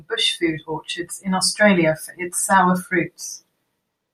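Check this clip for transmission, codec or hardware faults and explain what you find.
Nothing faulty turns up anywhere in this speech recording.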